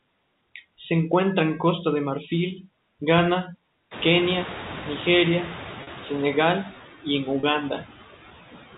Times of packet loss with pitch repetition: 5.83-5.87, 7.40-7.43

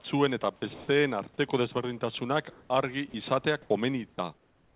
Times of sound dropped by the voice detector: 0.02-0.04, 0.74-0.88, 3.10-3.14, 3.62-3.70, 4.14-4.18

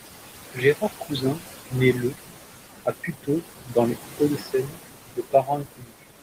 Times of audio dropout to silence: none

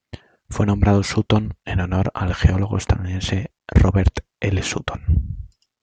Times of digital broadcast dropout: none

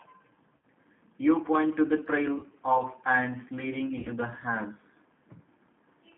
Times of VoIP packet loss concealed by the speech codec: 0.57-0.65, 2.39-2.47, 3.99-4.08

